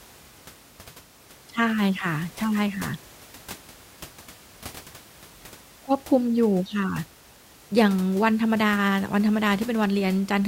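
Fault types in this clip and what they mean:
No system faults detected; the only background is room noise sitting about 23 dB below the speech, which belongs to the recording itself.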